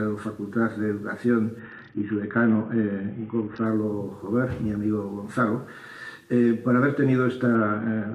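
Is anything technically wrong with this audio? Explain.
Yes. From 1.59 to 3.66 s and again from 7.55 s to the end, the treble dulls and gritty noise rises: a Bluetooth SBC bit pool drop, which fits the bit pool falling from 31 to 6 (about 55 kbps). This starves the upper sub-bands and coarsely quantises the rest.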